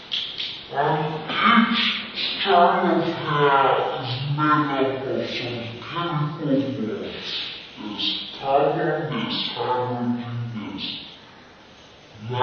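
From start to end the whole thing runs at half speed and a full octave low, the classic wrong sample rate fault. It sounds like audio captured around 44.1 kHz being played back near 22 kHz with no conversion, so everything drags and sinks together.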